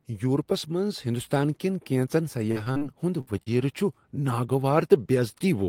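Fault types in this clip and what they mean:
Repeated packet loss (robotic sound): after "ہندوستان کٮ۪ن کینٛژن", 2.51 to 2.83 s breaks up in four patched holes, longest 44 ms, sounding choppy and robotic. Unlike a single burst, the gaps recur.
Burst of packet loss: at 3.21 to 3.29 s one continuous 60 ms hole is filled by the last sound fading out, then speech resumes further on, unlike repeated short gaps.
Short concealed packet loss: around 3.43 to 3.48 s about 40 ms goes missing and is bridged as a brief smear, shorter than the burst before it.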